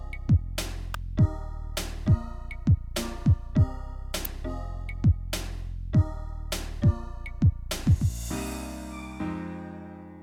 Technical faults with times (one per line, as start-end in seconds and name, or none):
0.94 electrical switching spike
4.25 electrical switching spike